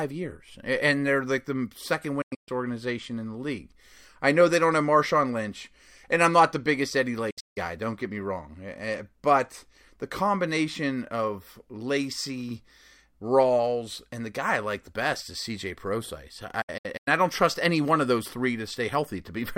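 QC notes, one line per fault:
2.22–2.49 s, 7.30–7.58 s and 16.62–17.08 s: digital broadcast dropout. The receiver mutes wherever frames fail to decode, with an 8 ms fade, and resumes once good frames return. Each event loses 224 ms of speech in short holes, consistent with roughly seven 32 ms frames. The longest holes are 128 ms, 160 ms and 96 ms, and the last event is spread over 448 ms. On the waveform these are flat gaps with ramped edges. On the spectrogram they are full-band blank columns.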